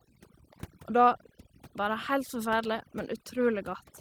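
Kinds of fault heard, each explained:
Overdone noise removal: bands near the noise floor are cut away, leaving near-silent gaps with twinkling specks, unlike codec muffling, which narrows the whole band evenly.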